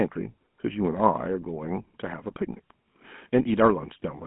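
From start to finish the speech carries GSM full-rate codec damage, plainly audible: a buzzy, gravelly roughness from pulse-excited vocal-tract coding, consistent with 13 kbps. The line band runs roughly 150 Hz to 3.4 kHz, with nothing above 3.8 kHz.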